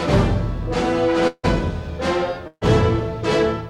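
A short stretch of audio with two network gaps. From 1.27 to 1.45 s the sound is held as a fading buzz or hiss, then drops to silence, likely a long network dropout losing about 160 ms. From 2.47 to 2.63 s a burst of packet loss removes about 140 ms. The last sound is stretched and faded before the audio resumes further on.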